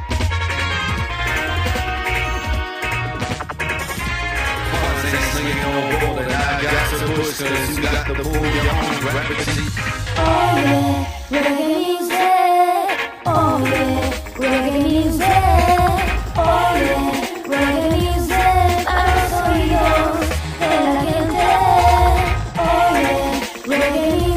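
A channel delay (doubling) runs throughout: one channel lags by about 92.9 ms, fitting a 4096-sample buffer, so the mono sum shows every onset twice at equal amplitude.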